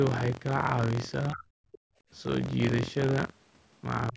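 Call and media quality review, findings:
Buffer tearing, throughout, present only while speech is present. Robotic rattle at 43.1 Hz, which fits a 1024-sample ring buffer. Writer and reader pointers slipped, so a small slice of each period replays audio about 50 ms stale, with hard joins.

Speech suppressed in double talk, 1.31–1.45 s. Talker's speech ducks by roughly 30 dB over about 150 ms. Likely the echo canceller, unable to separate near speech from loudspeaker echo during overlap, attenuated both.

Speech suppressed in double talk, 4.11 s to clip end. Shorter dip of roughly 20 dB over about 70 ms. Likely the same mechanism: overlap makes the canceller suppress the near talker along with the echo.

Other side's voice leaking through, 1.72–1.78 s. Brief scrap of a second voice, roughly 25 dB under the talker. Likely residual far-end echo: loudspeaker playback reached the microphone and the echo canceller did not fully remove it.

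Background gated by the echo canceller, 1.78–2.1 s. Room tone drops out by about 34 dB for about 300 ms, directly after the leak, then recovers. Canceller clamped the microphone hard while the loudspeaker was active, then released. Band limit at 8 kHz from call microphone processing is expected.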